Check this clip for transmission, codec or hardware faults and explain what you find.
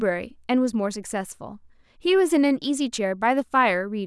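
No transmission, codec or hardware faults.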